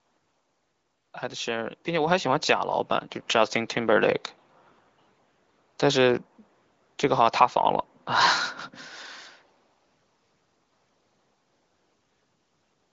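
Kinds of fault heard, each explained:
Microphone volume stepped up: at 2.07 s and again at 3.09 s, the speech and the background noise jump up together, by about 5 dB and then about 2 dB. Call software judged the input too quiet and raised the device's input gain in single abrupt steps.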